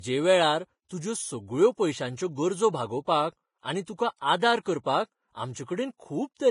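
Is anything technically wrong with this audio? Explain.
Yes. Throughout, the speech sounds hissy and grainy, with nothing above 10.5 kHz; the likely cause is heavy Vorbis compression, consistent with a bitrate near 28 kbps, coarsely quantising the treble into noise.

Short bursts of hiss precede attacks at 0.89 s, 3.96 to 3.99 s (about 35 ms) and 4.64 s. This is pre-echo: quantisation noise spread across a transform block leaks ahead of each sharp onset and softens it.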